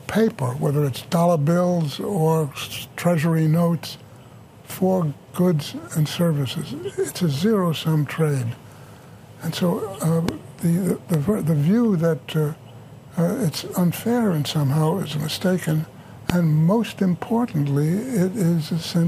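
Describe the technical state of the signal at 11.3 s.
A loud pop occurs from 11.14 to 11.31 s: two sharp pops in quick succession, peaking about 15 dB above the sound, which continues underneath. The likely cause is a sudden voltage pulse from a switch, plug or static discharge, shaped by the circuitry that follows it.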